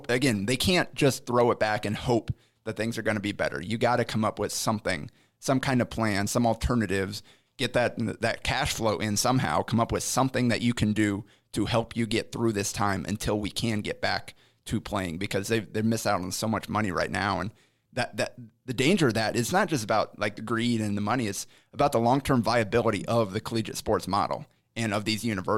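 No technical faults are audible.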